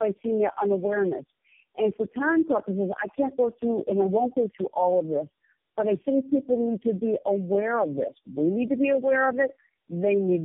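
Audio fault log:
Throughout: tandem speech coding. The sound is rough, muffled and warbly, with nothing above 3.6 kHz. It fits a chain of four low-rate speech codecs, AMR-NB and G.723.1, bridged by G.711. Each decode and recode piles fresh distortion onto already degraded audio.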